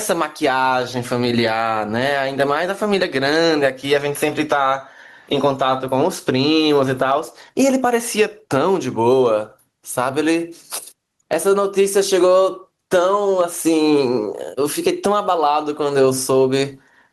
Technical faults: gain pumping

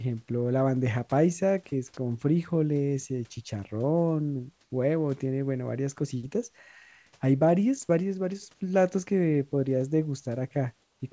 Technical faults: comfort noise in place of the background

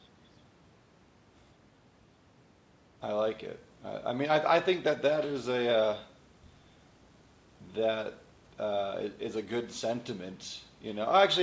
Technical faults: none

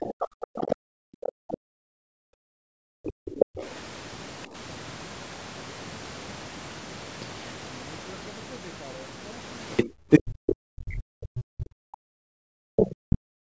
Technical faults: other side's voice leaking through; background gated by the echo canceller; speech suppressed in double talk

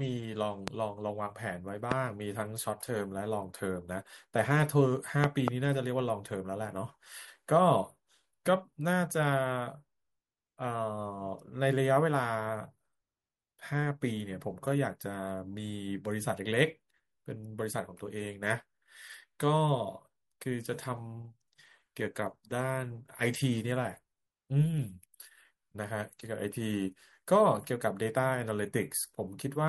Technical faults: loud pop

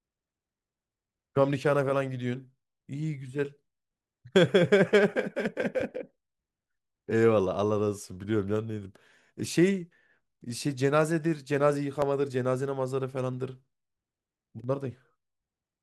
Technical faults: clock drift buffer slips

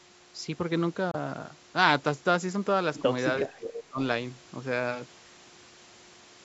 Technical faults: Bluetooth dropout; speech suppressed in double talk

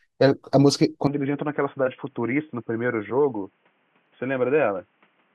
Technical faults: input switched to a poorer device

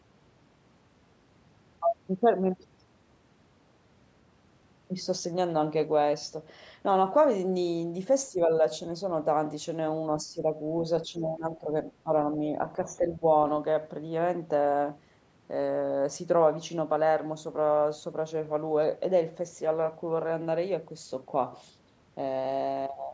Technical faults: speech suppressed in double talk

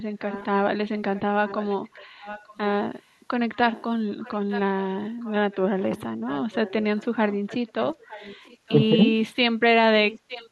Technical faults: echo leak

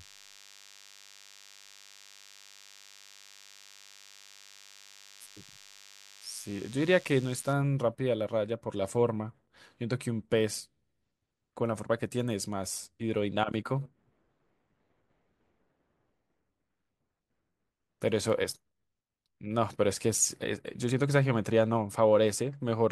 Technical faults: DECT cordless phone buzz

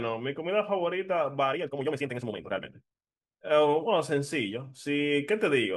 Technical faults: time-stretched section

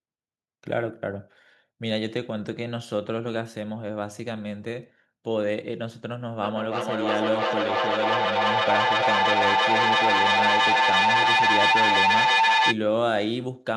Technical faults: feedback howl

